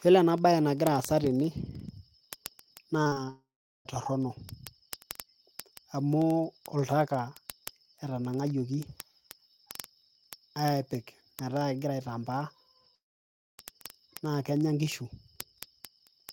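From 0.12 s to the end of the speech, word clock ticks recur roughly every 40 ms: the receiver's clock is unlocked and runs roughly 500 ppm off, slipping one sample per tick.

At 3.03, 3.07 and 3.13 s, three adjacent bursts of short concealed packet loss, about 20, 40 and 20 ms long, are patched by extrapolation and heard as a brief smear.

At 3.30 s and again at 12.95 s, the sound continues as a fading buzz or hiss, then drops to silence for about 0.39 s and 0.61 s. Audio resumes at 3.87 s and 13.60 s with material missing, the likely result of a long network dropout.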